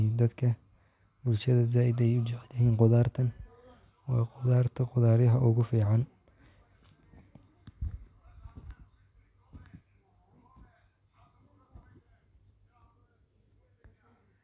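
Speech recording; no technical faults can be heard.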